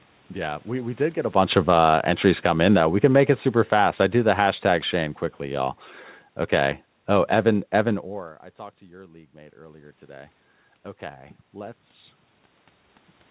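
Automatic gain falling happens twice in this speech: after the talker's level jumps around 1 s, the gain control pulls its gain down by about 7 dB between 1.32 and 3.03 s, just after "we did get a", then by about 3 dB more from 3.57 to 5.78 s, after "can make it". Voice and room noise sink together each time. Automatic gain rising follows the talker dropping by about 19 dB near 8 s. From 8.97 to 10.42 s, after "I talked to", the control lifts its gain by about 4 dB, so voice and background swell together over roughly 1.5 s, all within a telephone band that stops at 4 kHz.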